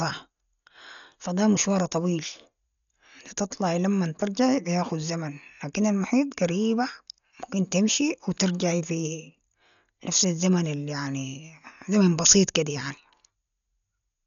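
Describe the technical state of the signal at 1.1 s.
At 1.1 s the speech is dull and band-limited, with nothing above 7 kHz and a rough, fluttering noise around tonal parts, present throughout the clip. This heavy damage is likely Dolby Digital compression at a very low bitrate, consistent with about 48 kbps, where lines left without mantissa bits are filled with dither noise.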